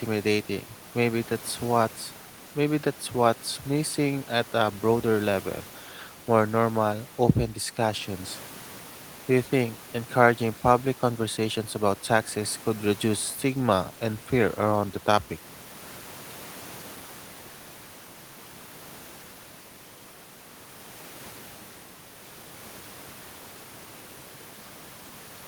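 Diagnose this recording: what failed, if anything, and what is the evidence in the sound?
Nothing failed, and the sound gives no evidence of any fault.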